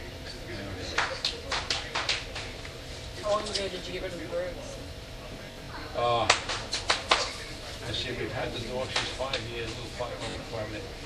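Everyday sound, with Bluetooth stutter three times. From 1.92 to 1.95 s, a 21 ms slice repeats. From 5.46 to 5.69 s, scattered repeats form a machine-gun stutter; the longest run is 64 ms. From 10.30 to 10.36 s, about 43 ms repeats. Lost or late packets made the receiver replay its last buffer.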